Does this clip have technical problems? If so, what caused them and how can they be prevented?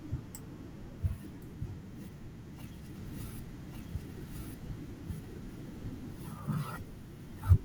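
Yes. From 2.96 to 6.40 s the speech is heard twice, a second copy at about the same level trailing roughly a second behind, dry and switching in and out abruptly: a doubled audio track, likely from a second capture path or misaligned edit. Monitor routing and check edits for duplicated regions.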